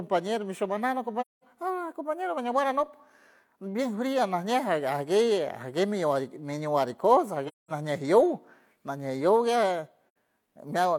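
At 1.21 s, 7.47 s and 10.09 s the speech drops into silence: AAC frame loss with muting, roughly 0.21 s, 0.21 s and 0.09 s long, fitting about five, five and two lost frames. Unlike a hard dropout, overlapping windows fade each hole in and out.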